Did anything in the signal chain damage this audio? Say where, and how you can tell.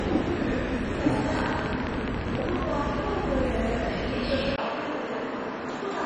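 Yes. Codec stage: the whole clip sounds dull and gurgly, with nothing above 10.3 kHz. This likely comes from heavy MP2 compression, consistent with about 32 kbps.

A train of clicks runs from 1.39 to 2.64 s, about twenty ticks of much the same shape at a regular 14.6 per second. They peak around 15 dB above the sound, likely from interference in analogue wiring.

At 4.56 s there is a 20 ms gap, then the band stops at 7.6 kHz and new hiss appears. The input was likely switched to a poorer device.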